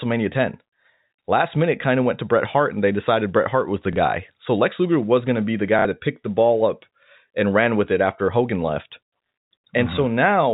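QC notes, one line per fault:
3.93 to 3.96 s, packet loss with last packet repeated: just after "was the", about 30 ms goes missing and the receiver fills the gap by replaying the previous chunk, so you get a tiny blip.
5.79 to 5.85 s, packet loss with last packet repeated, longer this time: between "going to be the" and "that picked the ball", 60 ms gets patched by repeating the same chunk twice. That produces a short robotic stutter with a buzz around 33 Hz, which fits 30 ms packets. The band-limited telephone-line sound of the G.711 coding is audible around both spots.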